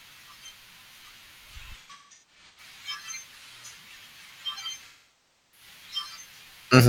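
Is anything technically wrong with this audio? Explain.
Yes, there are two bursts of AAC frame loss with concealment, from 1.81 to 2.60 s and from 4.88 to 5.66 s. Compressed frames failed to arrive, so the decoder rebuilt each gap from the last good spectrum with sign-scrambled or interpolated energy. In the first burst about 0.55 s of audio is missing, scattered across about 0.77 s, with the longest gap around 150 ms. In the second about 0.64 s is lost. The speech turns smeared, noisy and phasey in those stretches.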